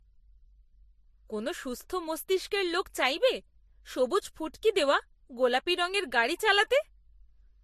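Throughout the speech, there is nothing above about 13.3 kHz, and two different kinds of coding artefact are heard together. That points to transcoding between lossy codecs, likely a Vorbis-type encode later re-encoded as MP3 at similarly low bitrates. A single codec pass would leave only one kind of artefact.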